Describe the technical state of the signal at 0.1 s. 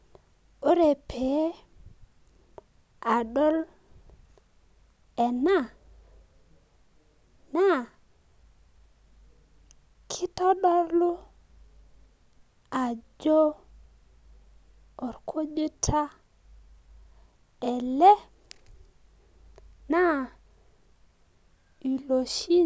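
At 0.1 s the speech signal is intact, with no audible fault at that moment.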